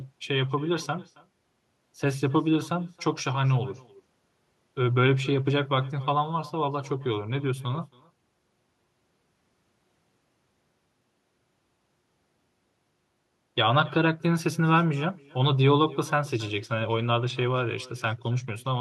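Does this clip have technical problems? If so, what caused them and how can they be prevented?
Yes. Throughout the speech, each phrase is shadowed roughly a third of a second later by a faint, thin copy about 23 dB down. This is echo with no canceller: the far end's loudspeaker feeds its microphone, returning the voice. Far-end echo cancellation or a headset prevents it.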